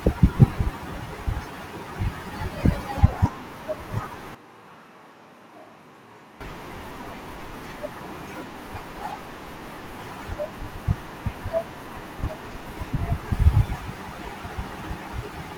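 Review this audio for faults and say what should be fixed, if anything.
From 4.35 to 6.40 s the speech turns abruptly roomy and hollow, drops about 10 dB and loses bass, likely a switch to a distant microphone. The waveform shows a sudden step down in level, and the spectrogram shows weaker lows and a noise floor only about 35 dB below the speech. Monitoring the close microphone's feed during recording and keeping a backup close-mic track would prevent it.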